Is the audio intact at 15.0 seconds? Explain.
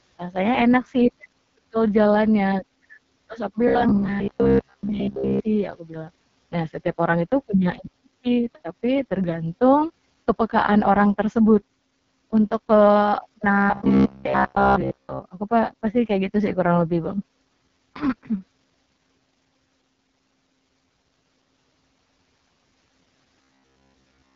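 No. Robotic sound from repeated short buffers runs from 13.52 to 15.21 s, so 15.0 s falls inside it. The likely cause is new audio arriving too slowly, with playback filling the gaps by looping the most recent fragment, about 15 ms long, while most of the real audio is skipped. That loop imposes a rigid buzz at about 67 Hz, giving the speech a flat, metallic, mechanical tone that only loosely follows its original contour.

Underneath, the AMR wideband (HD Voice) codec is active for the whole clip at 6.6 kbit/s, its lowest rate. At that bitrate the vocal-tract model has too few bits to rebuild the speech cleanly, so the sound comes out rough and raspy. The band also stops at 7 kHz, and the top portion above 6.4 kHz is only synthetic noise shaped to fill the space.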